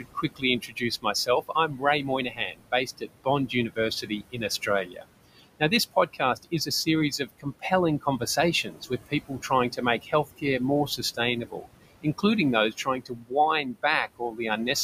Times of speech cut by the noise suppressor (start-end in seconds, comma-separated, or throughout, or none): 0.00-11.66, 12.02-12.24, 12.71-14.68